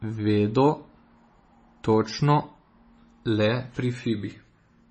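Speech runs for its full length with heavy MP3 compression damage throughout, the likely cause being a low-bitrate MP3 encode; the heavy damage fits a rate around 24 kbps. Nothing is present above 8.3 kHz, where the encoder has cut the treble to save bits, and weak frequency lines dropping in and out between frames give the sound a watery, swirling texture. Sibilants and consonant onsets come across smeared and metallic rather than crisp.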